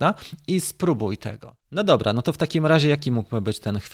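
Speech recording; no technical faults can be heard.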